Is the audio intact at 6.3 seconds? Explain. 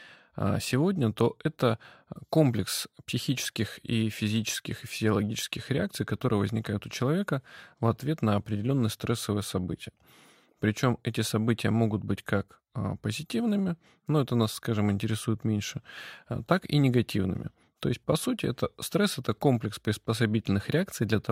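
Yes, the speech runs intact through 6.3 seconds, with no dropout, click, distortion or other fault at that moment.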